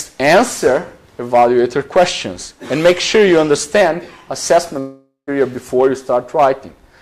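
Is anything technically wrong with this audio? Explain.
Yes. From 4.79 s to 5.29 s there is a long network dropout, likely from packets failing to arrive for about half a second. The receiver fills the gap by extending the last sound, which decays into a fading buzzy hiss, then about 120 ms of near-silence before audio resumes at 5.29 s. When it resumes, roughly 480 ms of material is missing, so the sound jumps forward rather than continuing where it left off.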